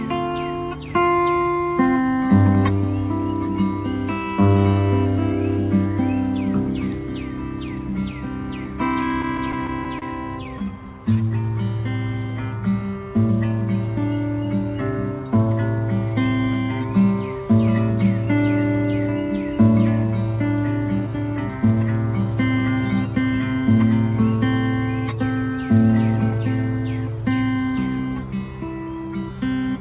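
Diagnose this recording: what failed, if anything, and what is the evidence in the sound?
The failure is in the network and jitter buffer stage: repeated stalls (stutter) between 9.22 and 10.04 s. You can hear six little catches where the sound hangs on itself, the longest about 29 ms, adding up to roughly 79 ms of filler across that stretch. Packets were turning up late, so the buffer kept running dry and the receiver stretched the last bit of sound to cover. Nothing is actually lost, it just drags and hiccups. The band stops at 4 kHz throughout, which is what a G.711 mu-law call path does.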